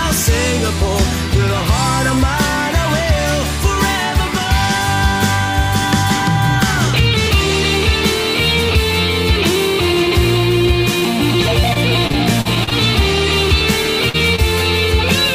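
At 10.99 to 11.03 s comes short concealed packet loss: about 20 ms of audio arrived too late and the receiver patched it by extending the preceding sound. It registers as a single brief smear or wobble rather than an audible gap, which sets it apart from the longer events that follow.

From 11.73 to 12.73 s, repeated packet loss (robotic sound) takes over. Seven separate gaps, none longer than about 39 ms, are each filled by continuation, adding up to roughly a sixth of that second. The quick succession of patches gives a choppy texture with pieces missing rather than one isolated blip.

At 14.09 to 14.16 s a burst of packet loss replaces a single longer stretch, about 46 ms, with a held continuation that fades as it runs. The result is a short sustained buzz or dying hiss before the sound picks up further on. A lone short concealment leaves only a brief smear, and repeated loss chops the sound again and again.

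A second short concealed packet loss follows at 14.36 to 14.40 s, another roughly 20 ms fill heard as a brief smear just after the burst.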